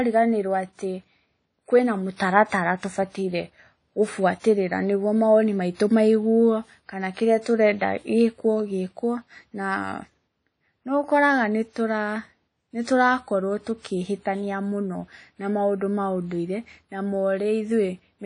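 WMA compression runs throughout the speech: nothing reaches above 10.1 kHz, and a ringing, washy hiss swells and fades with the signal. This is likely a low-bitrate Windows Media Audio encode, fitting roughly 32 kbps, where long transform blocks smear quantisation noise and zero weak detail.

Pre-echo appears from 2.16 to 2.20 s and again from 4.40 to 4.44 s. In each case a short hiss arrives ahead of a sharp onset, spreading about 37 ms and 43 ms before it, because the block's noise fills the quiet lead-in and softens the attack.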